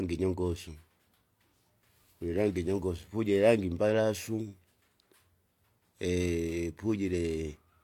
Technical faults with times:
none

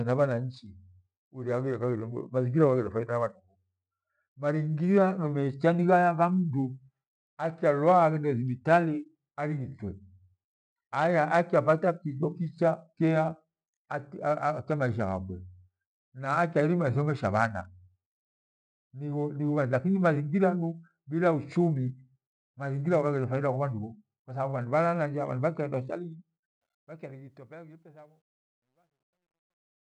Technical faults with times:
26.47-29.94 truncation distortion on a fade

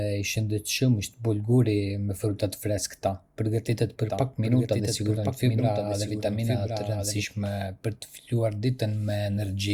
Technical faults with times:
4.09-7.25 doubled audio track

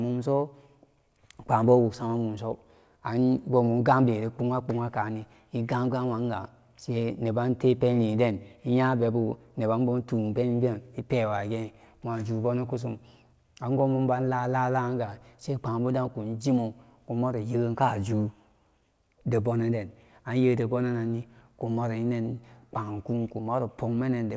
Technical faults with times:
none

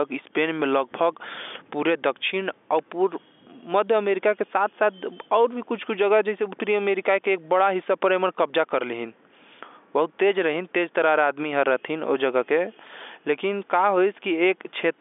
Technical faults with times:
none

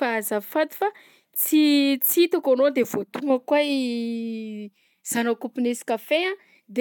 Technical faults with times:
none

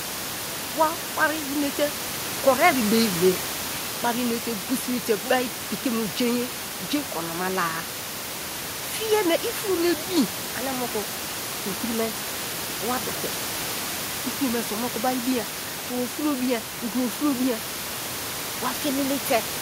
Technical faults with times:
none

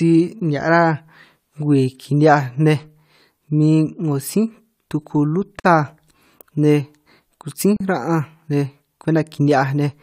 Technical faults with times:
5.60-5.64 gap at a join of encoded pieces
7.77-7.80 gap at a join of encoded pieces

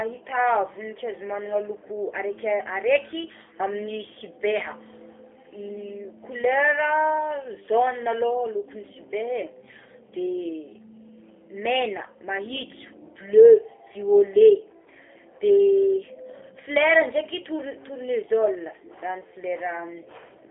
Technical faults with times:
0.00-20.51 G.729 codec

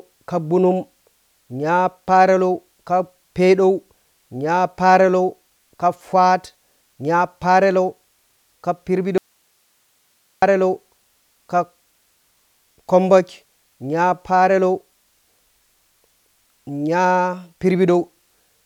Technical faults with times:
9.18-10.42 audio dropout to a faint residue

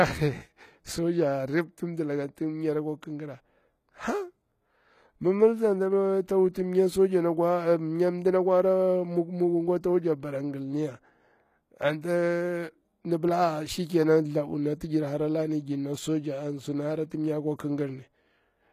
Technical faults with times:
0.00-18.73 HE-AAC compression
6.53 pre-echo
17.10 pre-echo

